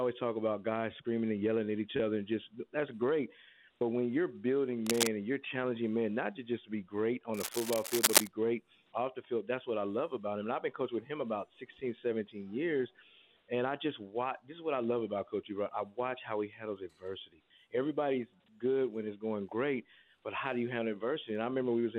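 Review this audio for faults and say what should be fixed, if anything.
A worn cable, connector or control being moved is the likely cause of the cable scratch noise at 4.86 to 5.11 s and again at 7.34 to 8.28 s. As the contact resistance jumps about, dense, uneven bursts of noise break into the signal at roughly the same level as the wanted sound. The result is a brief scratching, rustling layer over the audio, short in the first event and nearly a second long in the second. To prevent it, replace or clean worn leads and jacks, and keep cables and controls still while recording.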